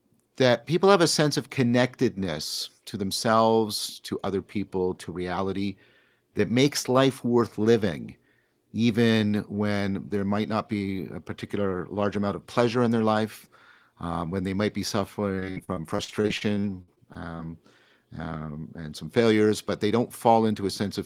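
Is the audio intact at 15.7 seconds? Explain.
No. Repeated packet loss runs from 15.35 to 17.41 s. Frequent gaps up to 58 ms get patched by repeating prior sound. The speech turns choppy, with pieces missing.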